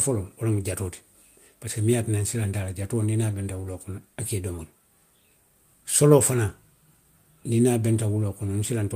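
Nothing in the speech signal points to a technical fault at any point.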